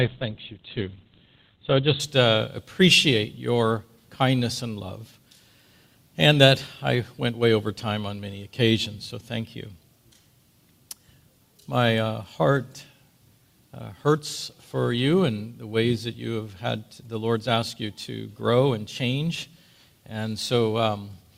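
For the first 2.0 s the audio plays from a low-bitrate adaptive stream, sounding dull and smeared with nothing above 4.5 kHz. On a spectrogram the top is cut flat. Then quality steps up without a gap, which fits a switch from roughly 12 to 64 kbit/s Opus.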